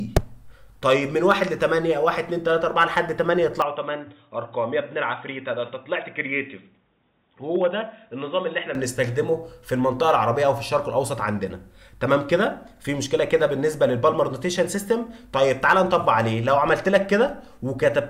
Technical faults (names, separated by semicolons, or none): input switched to a poorer device